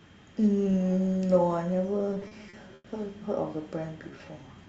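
Speech passed over a call link, with the coding noise and the sharp top-end cutoff near 8 kHz that fit an Opus stream at about 32 kbps, shows repeated stalls (stutter) from 1.99 to 2.86 s. Packets reached the receiver late, so its jitter buffer ran dry seven times. Each time it filled the hole by extending the last sound, 210 ms in all and about a quarter of that stretch, with the longest wait 90 ms. Nothing is lost, but the speech drags and catches. On a spectrogram these show as short blocks of frozen, smeared harmonics. The waveform shows copied cycles, and in the longest gap the level sags as the fill fades. From 4.11 to 4.67 s a jitter buffer slow-down builds up a reserve. Single pitch periods and bits of pause are repeated back to back, adding 86 ms, so the audio plays at about 86% speed at unchanged pitch, sounding drawn out. The spectrogram shows harmonics stretched sideways at the same height, and the waveform shows runs of identical periods.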